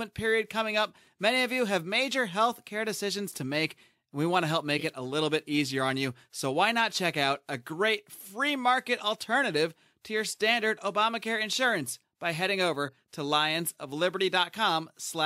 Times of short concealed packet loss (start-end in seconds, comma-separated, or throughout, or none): none